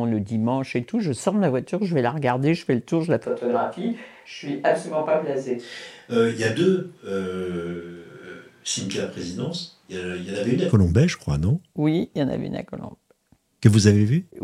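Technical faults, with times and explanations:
3.26 to 10.71 s, switch to a distant microphone: the speech abruptly turns roomy and hollow, loses bass and drops by about 5 dB, with room noise now audible some way beneath it, then snaps back. The close mic likely cut out, leaving a far one.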